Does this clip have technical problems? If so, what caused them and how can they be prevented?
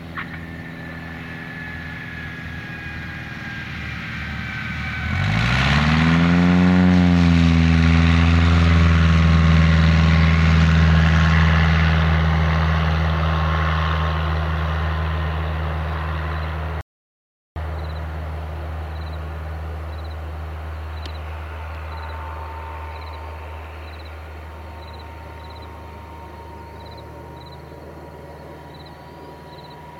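Yes. At 16.81 s the sound cuts off abruptly and the track drops to complete silence, with no room tone or background underneath, until it resumes mid-flow at 17.56 s. About 0.75 s of material is simply missing. This is an audio dropout to silence, most likely from the input being lost briefly, through a loose connection, a failed link or an accidental mute, while the recorder kept writing silence. Secure cables and connections, disable stray mute controls, and monitor the input live while recording.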